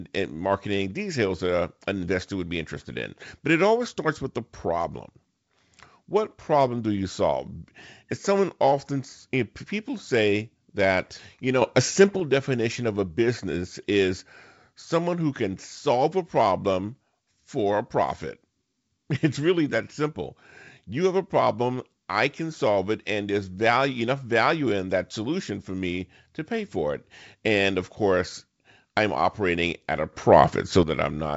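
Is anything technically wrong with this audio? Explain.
Yes. There are two sudden gain jumps, most likely a digital gain change applied instantly with no ramp. The speech and background noise leap up together: about 7 dB from 11.62 to 12.20 s, just after "say that you" and before "definition of a business", and about 9 dB from 30.13 to 30.83 s, following "I'm operating at a".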